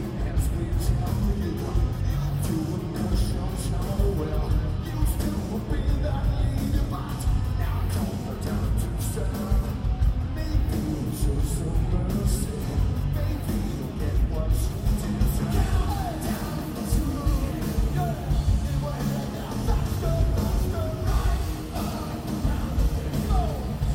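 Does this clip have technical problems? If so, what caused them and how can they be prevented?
No technical faults heard.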